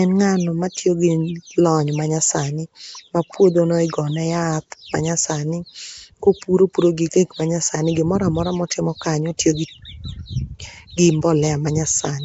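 Across the whole recording the speech carries a rough, hissy halo and a smeared, underwater character, with nothing above 7.7 kHz. The damage is plainly audible and points to Nellymoser compression, likely Nellymoser Asao at around 32 kbps. The codec spends a fixed, small bit budget on each short block, so weaker frequency bands receive no bits and are replaced with noise, which produces the grainy fizz around the speech and blurs transients.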